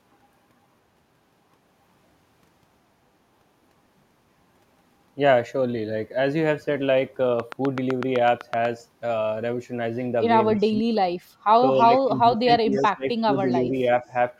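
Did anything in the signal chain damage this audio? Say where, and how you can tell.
Yes. A train of clicks runs from 7.40 to 8.66 s: about ten identically shaped clicks at a steady 8 per second, peaking roughly 10 dB above the signal. This is likely interference in the analogue wiring or a struggling interface. The regular spacing and identical shape set it apart from codec or packet-loss glitches.

Speech suppressed in double talk shows up in call processing at 10.52–10.85 s (dips up to about 10 dB), 11.6–13.07 s (about a second affected, up to about 20 dB) and 13.26–13.83 s (about 5 dB). The likely cause is an echo canceller ducking both talkers at once. It differs from network dropouts because the level dips and thins rather than going silent.

Echo leak appears at 11.8 and 12.75 s as brief copies of the sound delayed by 275 ms, about 25 and 30 dB below the speech. This is likely residual loudspeaker echo that the far end's canceller missed. 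A distinct, fixed-delay copy separates it from diffuse room reverberation.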